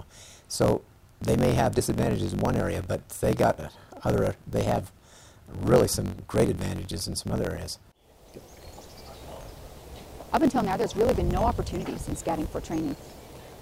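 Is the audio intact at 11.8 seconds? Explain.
No. At 11.8 s, as across the whole clip, there is a block size mismatch (truncated). One stage hands over blocks longer than the next stage reads, so the tail of every block is discarded. That causes a steady buzz at about 46.9 Hz, which fits a 1024-sample read, and the sound runs about 1.12 times fast while keeping its normal timbre. A sample-rate mismatch would raise the pitch along with the speed, and it would not buzz.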